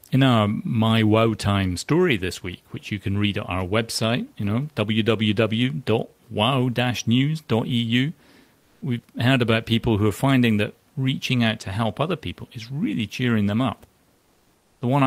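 From 8.59 to 8.81 s, about 220 ms of the room noise gives way to a steady, featureless hiss roughly 2 dB different in level. This is comfort noise in place of the background, likely from the sender's discontinuous transmission during the pause in speech.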